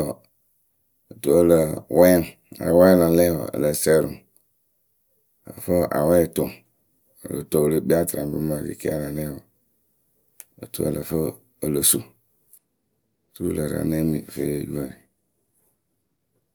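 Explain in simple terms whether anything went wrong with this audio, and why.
Nothing went wrong here, as far as the ear can tell; the speech holds steady all the way through, with nothing odd to point to at any moment.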